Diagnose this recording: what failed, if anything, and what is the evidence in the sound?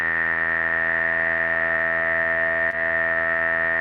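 At 2.70 to 2.74 s there's a short concealed packet loss on the network side: about 20 ms of audio never made it to the decoder, so the receiver extrapolated roughly 19 ms from the preceding sound and crossfaded back in. You hear it as a brief smear.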